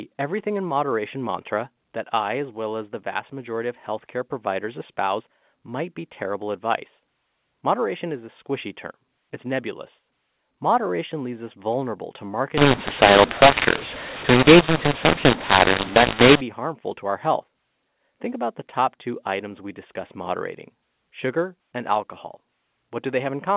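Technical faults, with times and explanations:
12.57–16.41 s, mu-law and A-law mixed up: after "leaves us vulnerable to", the A-law telephone stream is decoded as mu-law, scrambling sample levels. Speech turns harsh and pauses fill with hiss; unlike clipping, quiet parts are lifted too. Clean again by "harmful to our health".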